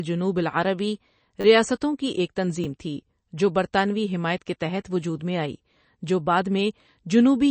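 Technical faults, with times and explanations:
Throughout, MP3 compression: the speech carries plainly audible codec damage, with nothing above about 8.3 kHz, so the treble is cut off flat and the top of sibilants is missing. The sound points to a low bitrate, around 32 kbps, which is the likely cause. Starved of bits, the encoder drops weak frequency lines that flicker on and off between frames, giving a watery, swirling texture, and consonant onsets lose their edge.
1.41 to 1.44 s and 2.64 s, repeated buffer: each event replays a 10 ms slice of audio with a hard join at every repeat, three extra plays in the first and one in the second. Fresh audio failed to arrive in time, so the device looped what it already held, losing about 30 ms and then about 10 ms of sound. With so short a buffer the repeats fuse into a brief buzz or click, not a distinct stutter.
3.73 s, pre-echo: a short hiss of about 10 ms sits just ahead of a sharp onset, and the attack itself sounds softened. 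The transform codec spreads its quantisation noise across the whole block, and because the transient lands late in that block, noise scaled to the loud part spills into the quiet moment before it, where nothing masks it.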